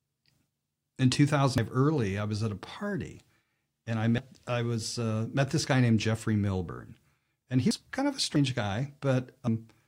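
At 1.58, 4.18, 7.71, 8.36 and 9.47 s, the speech jumps abruptly, likely a dropped buffer (overrun) where audio was overwritten before being read. No gap is left: roughly a tenth to a third of a second vanishes each time.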